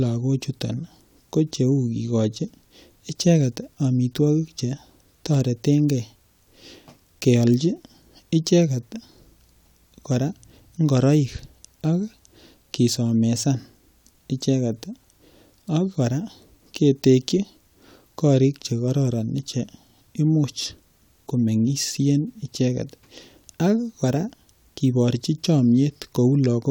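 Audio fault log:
Nothing stood out on listening to this speech recording.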